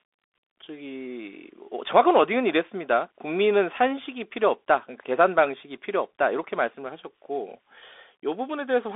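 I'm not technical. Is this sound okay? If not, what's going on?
No. The speech passed through a Bluetooth CVSD headset codec, a narrow phone-grade link, so nothing above 3.8 kHz survives throughout. It sounds muffled and boxy, with scratchy s sounds.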